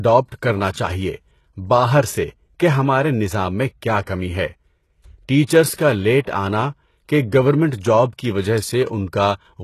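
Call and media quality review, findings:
Sibilants gritty, lispy, metallic treble throughout; nothing above 12.3 kHz. Likely HE-AAC compression: band replication fakes upper spectrum from copied lower bands. Damage fits about 16 kbps.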